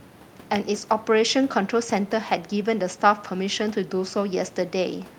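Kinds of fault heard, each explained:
No kinds of fault are heard in this speech.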